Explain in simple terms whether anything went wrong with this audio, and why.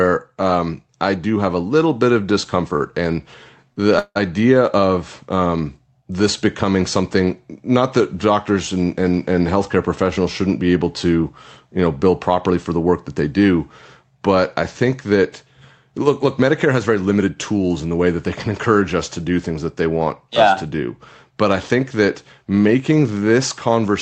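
Yes, a few things went wrong, all from the speech arriving unevenly over a call connection.

There are two short stalls from a late packet, at 2.76 s and 3.73 s. Each time a piece of the audio wasn't there when it was due, so the receiver held the last sound for about 41 ms until it turned up, then carried on from the same spot. Nothing is lost; a sound is simply held a moment too long. That tiny stretch, with no real gap, is what separates these from the next fault.

A call audio freeze follows at 3.99 s and lasts until 4.17 s. Here the wait was much longer, 167 ms. The last sound is drawn out into a fading buzz, and about 50 ms of it drops to silence before the speech resumes exactly where it stopped. The likely cause is a burst of packets held up on the way. It is a freeze rather than a stall because the added pause is long enough to hear as a break.

From 16.05 s to 17.28 s there is a jitter buffer speed-up. 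Having built up too much waiting audio, the receiver trimmed many tiny slices, about a tenth of a second in total, so the speech plays about 7% faster. The pitch stays the same, which is how it differs from a tape-style speed change; it simply sounds slightly hurried.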